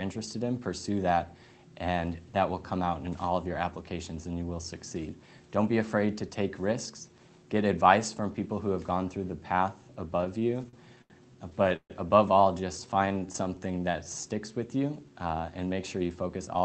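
Repeated stalls (stutter) begin at 10.21 s and run to 11.12 s. Packets arrived late, so the jitter buffer kept running dry. Ten short gaps were bridged by continuing the last sound, 205 ms in total. The longest lasted 83 ms. Nearly a quarter of that stretch is filled-in sound. Nothing is lost, but the audio catches and drags.

A second burst of stutter follows from 11.50 s to 11.92 s. There are four gaps this time, 168 ms in all. One gap reaches 136 ms, long enough for the held sound to fade. Forty percent of this span is concealment. The hitch is heavier here.

A jitter buffer slow-down runs from 12.60 s to 14.22 s. The buffer was low or had just raised its target delay, and needed a reserve. The receiver repeated single pitch periods again and again, adding 239 ms. Playback drops to 86 percent speed, with pitch unchanged. Sounds stretch out and can warble slightly.

Inside that slow-down, from 13.06 s to 13.47 s, the stutter returns briefly. 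Four tiny gaps total 42 ms. None exceeds 11 ms. These add small catches to the dragging sound.

A jitter buffer speed-up closes the clip, from 16.03 s to 16.63 s. Too much audio had piled up in the buffer. The receiver trimmed short pitch-period pieces, about a tenth of a second overall. Playback runs at 113 percent speed at the same pitch. The ending sounds hurried.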